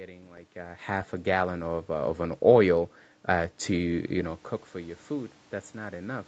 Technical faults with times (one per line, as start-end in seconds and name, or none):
0.53-6.27 automatic gain rising